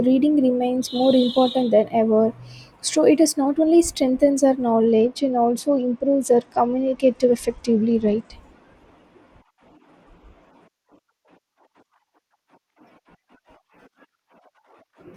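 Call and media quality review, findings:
Speech dull and gritty, treble missing, 4.87 to 8.33 s. Bluetooth SBC bit pool drop: link congestion starves top sub-bands, rest coarsely quantised. Consistent with bit pool 28 falling to 11, near 90 kbps; recovers 8.33 s.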